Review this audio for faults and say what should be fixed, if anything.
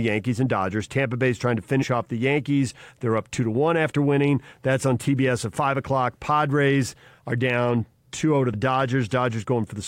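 Damaged data in a compressed stream: corrupted bytes make the decoder misread frames and lose sync, producing brief blips at 1.81 to 1.84 s and 8.52 s. Verifying checksums and using error-resilient transport would prevent this corruption.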